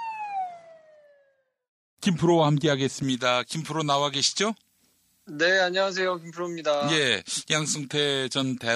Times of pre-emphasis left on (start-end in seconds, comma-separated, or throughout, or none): 3.03-8.75